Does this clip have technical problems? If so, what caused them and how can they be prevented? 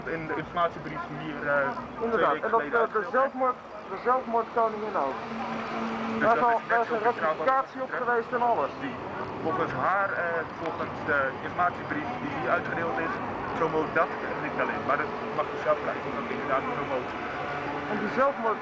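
No, nothing in this clip points to a technical problem, so there is no cause to trace and nothing to prevent.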